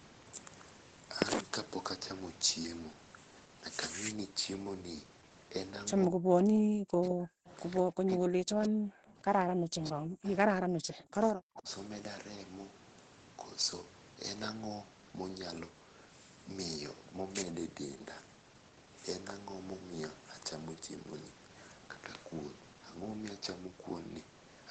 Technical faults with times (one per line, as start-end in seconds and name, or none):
6.07-7.49 speech suppressed in double talk
7.09-7.14 echo leak
7.47-7.81 echo leak
7.83-9.20 speech suppressed in double talk
8.11-8.15 echo leak
9.45-11.68 speech suppressed in double talk